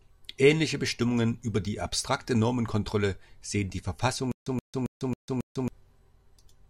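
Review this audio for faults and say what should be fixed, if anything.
Stutter with silent gaps from 4.32 to 5.68 s, right after "sehen die": a 125 ms fragment of speech repeats five times, each followed by 148 ms of digital silence, giving a 273 ms cycle. The likely cause is a stalled stream replaying its last fragment at each retry, and the speech for that span is lost. Prevent it with deeper buffering and reliable delivery so playback never underruns.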